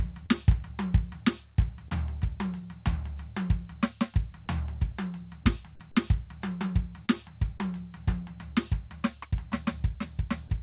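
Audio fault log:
0.26 to 8.58 s (at 0.26, 1.88, 7.06 and 8.54 s), short concealed packet loss: Four 20 ms chunks of the music arrived too late. Each hole was filled for 20 to 25 ms by extending the previous sound. The result is a brief smear or wobble. At 1.88 s, 13 ms was also dropped. The call path cuts everything above 4 kHz, consistent with G.711 mu-law.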